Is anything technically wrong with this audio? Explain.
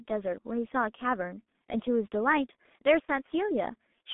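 Yes. The speech runs through a G.723.1 codec for its whole length. At about 6.3 kbit/s with 30 ms frames and slowly updated voice modelling, the damage is heavy: muffled, hoarse tone and smeared consonants. A spectrogram shows energy confined to roughly 200 Hz to 3.5 kHz, with blurred harmonics.

At 3.05 to 3.08 s, VoIP packet loss concealed by the speech codec fills a 30 ms gap. The decoder extends its last pitch and filter at falling gain, giving a brief fading stretch of tone or coloured noise. The waveform shows a shrinking repetitive stretch, then weak recovery.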